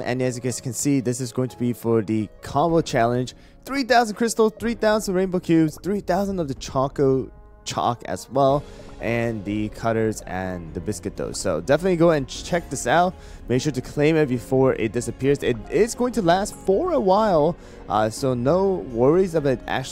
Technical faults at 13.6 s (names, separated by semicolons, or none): none